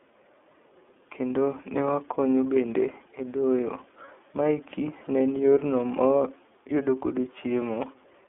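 Throughout, the speech carries the iLBC codec's narrowband sound: the line band runs from about 250 Hz to 3.5 kHz, and the plainly audible rough, synthetic texture fits iLBC's 30 ms frame mode at 13.33 kbps, with each frame's excitation coded independently.

At 4.04 to 4.09 s, after "wakonyo bende e doyo", and at 6.18 to 6.21 s, after "ne en yorno ma", come lost iLBC frames. Each gap, about one 30 ms frame, is filled by a repeated pitch cycle mixed with noise, heard as a brief buzzy held vowel, and the speech recovers immediately.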